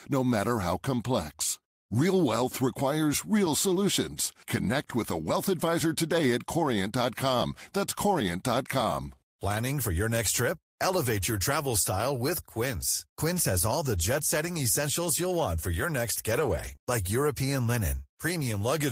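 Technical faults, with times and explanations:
16.31–16.86 s, repeated packet loss (robotic sound): right after "want for your next", three short dropouts land close together, the longest about 19 ms. Each one gets papered over by stretching the preceding sound, so that half-second turns choppy, with pieces missing.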